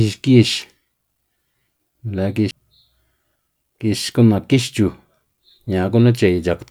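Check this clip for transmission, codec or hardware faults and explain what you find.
One fault shows up in this speech clip. A CD skip occurs at 2.51 s: a knock or a disc flaw threw the laser onto another turn of the spiral, so the player muted for a few milliseconds, producing a brief tick, and resumed from a different point, making the speech jump abruptly.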